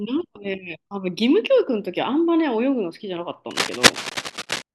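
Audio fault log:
3.51–4.62 s, cable scratch noise: dense, uneven scratching bursts about as loud as the speech, likely from a worn connector being moved, its contact resistance fluctuating rapidly.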